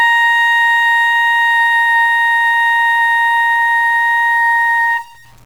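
It's a music clip with a harsh, buzzy grit sitting on it the whole way through, and the quiet moments fill with noise instead of going clean. That's likely a stuck bit, with one data bit pinned so values jump by a step of roughly -40 dBFS.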